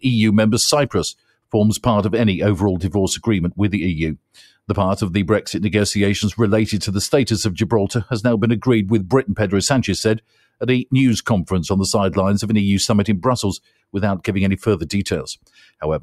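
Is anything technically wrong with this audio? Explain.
Yes. A noise suppressor meant for speech was applied to music or sounds throughout, treating steady content as noise and swinging the level by roughly 5 dB, so the sound pumps.

Sound cut by the noise suppressor occurs at 1.16–1.53 s, 4.16–4.69 s, 10.19–10.61 s, 13.59–13.95 s and 15.36–15.82 s. Held material dips by about 19 to 21 dB.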